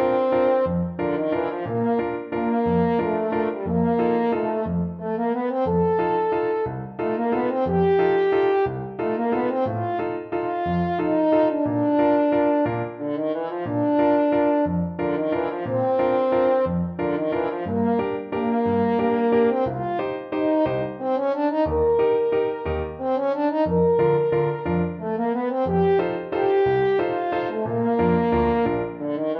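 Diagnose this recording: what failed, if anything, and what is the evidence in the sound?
Nothing failed, and there is no evidence of a fault anywhere in the sound.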